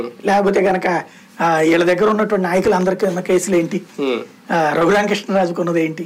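Loud pop at 2.65 to 2.85 s: two sharp thumps a few decibels above the sound, likely a voltage spike from a plug or switch, while the audio continues beneath.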